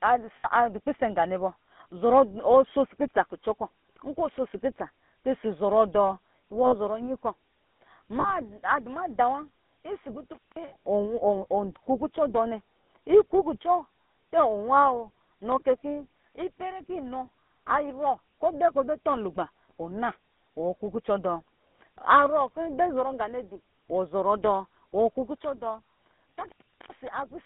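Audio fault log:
throughout GSM full-rate codec: a low-rate vocal-tract coder with pulse excitation, consistent with 13 kbps, limits the line to roughly 200 Hz to 3.6 kHz, leaving speech audibly buzzy and gravelly.
0.36 s to 0.46 s, 6.66 s to 6.75 s, 8.20 s to 8.31 s, 10.68 s to 10.73 s lost GSM frames: dropouts of 80, 60, 40 and 40 ms, each concealed by repeating the last good frame, producing a brief rough, metallic ring.
10.33 s to 10.56 s, 26.30 s to 27.08 s intermittent contact: the connection opens for about 190 ms and then about 400 ms, so the sound cuts out with crackle at each edge.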